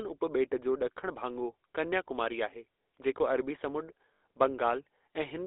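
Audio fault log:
throughout, GSM full-rate codec: the sound is confined to roughly 300 Hz to 3.7 kHz and carries a plainly audible buzzy, gravelly roughness from coarse pulse excitation of a vocal-tract model. That grit, beyond mere narrow bandwidth, separates it from a plain telephone filter and fits a 13 kbps coder.
4.14 to 4.22 s, lost GSM frames: for 80 ms the sound freezes into a rough, metallic ring as the last good frame is repeated, which fits four 20 ms frames. Unlike a dropout, it holds the sound instead of going silent.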